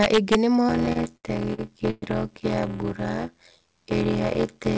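From 0.03 to 0.35 s, integer overflow breaks up the opening. Peaks pushed only about 2 dB past full scale wrap around to the opposite sign instead of being held at the limit, so each one jumps across the whole range. The result is harsh, snapping cracks rather than the flattened, fuzzy distortion of clipping. That sign flip is what separates it from an ordinary overload.

At 0.68 s a block size mismatch (padded) begins and lasts to the end of the clip. The writing stage delivers less audio than the reading stage takes, which fits a 512-sample read block, and the shortfall in each block is filled with silence. The repeated gaps give a steady buzz at about 86 Hz. The speech runs at 0.625 times its normal speed with its timbre intact, which rules out a simple sample-rate error.

Between 0.86 and 2.04 s, repeated stalls (stutter) overlap that slowdown. The jitter buffer runs dry five times, and the receiver stretches the last sound to cover 260 ms in total, with the longest wait at 118 ms. 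That concealment fills about a fifth of this stretch. No audio is lost, unlike dropouts, but the sound hitches and drags. All of this comes through a band-limited call path with nothing above 8 kHz.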